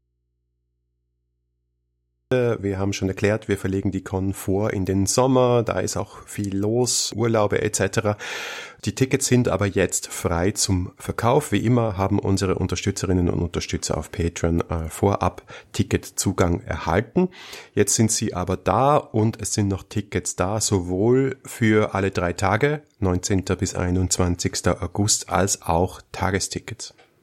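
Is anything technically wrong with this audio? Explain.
Yes. An audio dropout to a faint residue runs from the very start until 2.3 s. Only mains hum remains, around 50 dB below the speech, which then cuts in abruptly. The likely cause is a lost feed while the open input stayed live.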